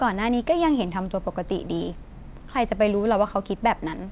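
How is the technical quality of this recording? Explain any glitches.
No glitches to explain here: it's just speech that has come through ordinary mu-law telephone coding, so the narrow, phone-like top end you hear is simply how that format sounds.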